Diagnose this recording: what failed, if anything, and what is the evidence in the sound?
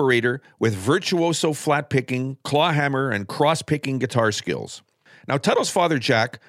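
Nothing has failed in this speech recording. No stage of the chain leaves any audible sign of a problem.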